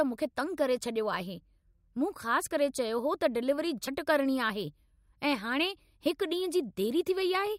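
A speech clip with a brief corrupted burst from 3.85 to 3.88 s, likely a broken MP3 bit reservoir after dropped frames, matching roughly one 24 ms frame.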